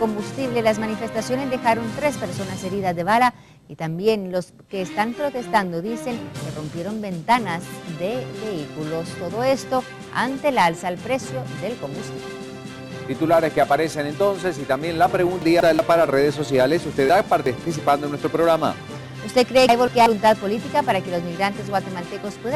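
Chunks out of order occur at 15.42–15.79 s, 17.09–17.65 s and 19.69–20.06 s. Blocks of about 186 ms play one, two and one chunk late respectively, so the sound briefly jumbles and each swap leaves hard joins.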